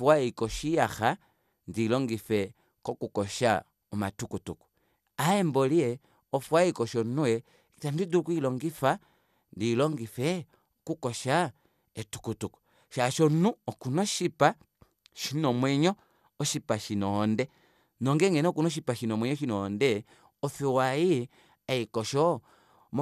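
A speech recording with no technical faults to point to. Nothing in it needs a time stamp or a cause.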